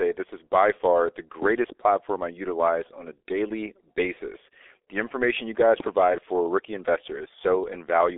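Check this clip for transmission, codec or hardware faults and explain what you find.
One fault runs through the whole clip. The speech passed through a G.723.1 codec, whose coarse encoding points to a rate around 6.3 kbit/s. Its slowly updated 30 ms voice model and a 300 Hz to 3.5 kHz line leave nothing above 3.5 kHz, so the speech sounds heavily muffled and hoarse, with smeared consonants.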